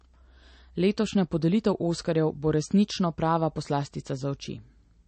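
Throughout the speech, the treble stops abruptly at 8.3 kHz, and sibilants chirp over a watery, swirling texture. This is likely MP3 compression at a bitrate near 35 kbps. Unlike a plain low-pass filter, weak frequency components flicker between frames, creating the swirl.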